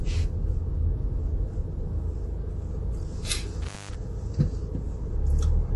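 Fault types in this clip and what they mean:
MP3 compression: The encoder likely ran short of bits, with the damage plainly audible and consistent with a low rate near 48 kbps. It discards everything above about 11.5 kHz, leaving the top end dull and cut off flat. Weak frequency components drop in and out between frames, so the sound takes on a watery, swirling texture, with metallic chirps on bright, hissy parts and softened, smeared attacks throughout.
Intermittent contact: A loose cable or plug briefly breaks the signal path between 3.62 and 3.95 s. The line stays open for about 0.21 s of that span, and the sound drops out, leaving faint hiss. Crackle marks the edges where the contact breaks and then reconnects, so the gap is framed by short, rough clicks rather than a clean silence.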